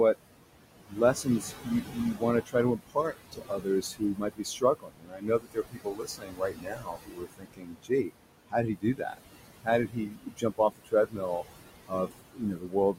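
Noise suppressor artifacts run through the whole clip. The room noise sits only about 10 dB below the speech, and the suppressor pulls bands it judges to be steady noise down by about 20 dB, frame by frame. The background therefore sinks in the pauses and swells back under each phrase.

Speech cut by the noise suppressor appears first from 0.88 to 8.1 s, then at 8.48 to 9.19 s, 9.64 to 11.44 s, and 11.87 s to the end. The suppressor mistakes parts of the speech for noise and turns them down with the background, by about 21 to 22 dB at worst. In the first span roughly four seconds in all are affected, and in the later spans about 0.3 to 0.7 seconds each. Soft consonants and quieter syllables come out swallowed and faint.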